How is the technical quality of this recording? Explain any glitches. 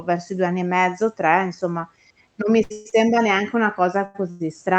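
The speech carries call-codec coloration, with the top end limited to about 8 kHz, and late audio delivery causes audible stalls toward the end.

From 2.63 to 3.17 s there are repeated stalls (stutter). Packets arrived late four times and the jitter buffer emptied, so the receiver stretched the last sound for 239 ms in total, the longest hold being 132 ms. The speech drags and stutters.

At 4.05 to 4.16 s and again at 4.30 to 4.42 s there is a short stall from a late packet. The buffer ran dry while a packet was overdue, so the preceding sound is held for about 90 to 100 ms, with a slight buzz or dip, before resuming.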